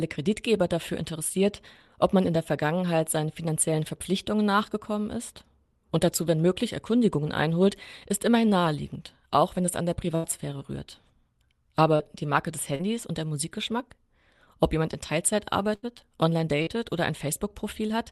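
Speech carried over a call connection, with Opus coding that cuts off the highs around 12 kHz, consistent with a 32 kbps setting. Twice the sound turns into a held buzz or fading hiss and then jumps ahead, at 10.15 to 10.26 s and 15.75 to 15.86 s. This is a burst of packet loss: about 80 ms went missing each time, and the receiver covered it by extending and fading the last sound. Three brief smears or wobbles at 11.95 to 12.02 s, 12.75 to 12.82 s and 16.63 to 16.70 s are short concealed packet loss, where roughly 40 ms never arrived and was patched from the preceding audio.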